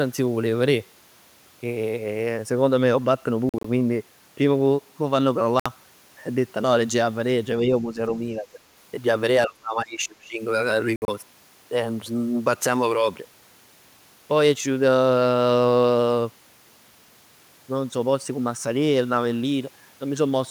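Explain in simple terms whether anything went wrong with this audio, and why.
Yes, two things went wrong. The likely cause of the first is a Bluetooth dropout: sound packets reached the headphones too late and were thrown away. The speech goes silent in short holes at 3.49 to 3.65 s, 5.60 to 5.68 s and 10.96 to 11.10 s, then carries on as if it never stopped.

The second is speech suppressed in double talk, likely because the echo canceller couldn't separate this talker from the other side's voice and turned everything down. The speech dips slightly at 7.87 to 7.98 s, more clearly at 8.40 to 8.58 s, and almost disappears from 9.47 to 10.41 s.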